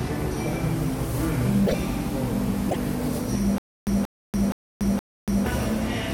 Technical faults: broken MP3 bit reservoir; stutter with silent gaps

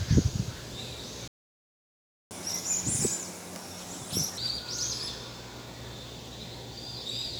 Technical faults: playback stall; catch-up at higher speed

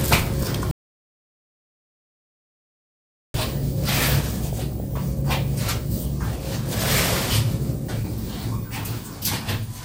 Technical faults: audio dropout to silence; DAB burbling

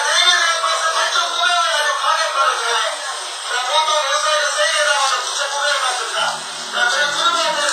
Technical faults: WMA compression

